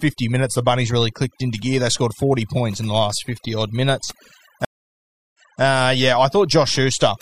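Overdone noise removal runs throughout: the processing cuts frequency bands near the noise floor too hard, leaving near-silent gaps with twinkling specks. A stream reconnect occurs from 4.65 to 5.62 s: after "odd minutes" the connection drops into about 0.69 s of silence, then a fresh decoder resumes 0.28 s earlier, repeating a moment of speech.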